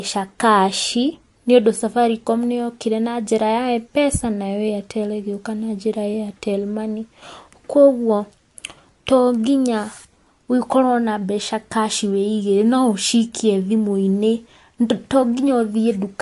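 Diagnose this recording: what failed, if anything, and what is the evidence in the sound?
The fault sits at the codec stage and runs through the whole speech recording. Content stops dead at 11.3 kHz, and what remains sounds watery and swirly, with s sounds smeared and chirpy. That is likely MP3 compression at a bitrate starved enough to fit roughly 49 kbps: the encoder discards the treble and drops weak frequency lines that flicker in and out between frames. On a spectrogram this shows as a flat ceiling at 11.3 kHz and speckled, holey patches below it.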